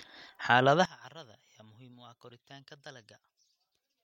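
From 0.85 s to the end, the speech collapses to a faint residue about 22 dB down, centred content nearly gone. The likely cause is one channel inverted, so the matched left and right signals cancel when summed to mono.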